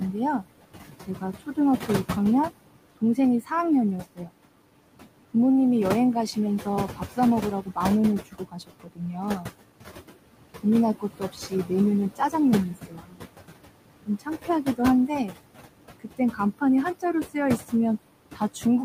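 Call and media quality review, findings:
Noise suppressor artifacts, whole clip. Room noise, about 11 dB under speech, pumped down by about 18 dB between phrases and back up under speech. Frame-wise band attenuation of anything classed as steady noise. Spectrogram: noise floor dark in gaps, refilling under voiced regions. Waveform: near-flat gaps, floor jumping at phrase onsets.

Speech cut by the noise suppressor, 1.07–1.89 s (about 100 ms affected, dips to about 10 dB), 2.97–4.32 s (about 200 ms, about 18 dB), 6.65–9.5 s (about 700 ms, about 18 dB), 10.55 s to end (dips to about 19 dB). Soft consonants, word tails or quiet phrases swallowed, low-level speech misread as noise and attenuated with it. Spectrogram: low-level speech energy dimmed along with the noise floor, syllable ends truncated. Waveform: envelopes chopped short, decays cut early.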